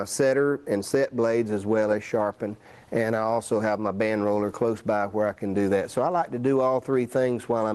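No technical faults can be heard in this audio, which passes through a call codec and jitter buffer working as intended, with content reaching up to about 12 kHz.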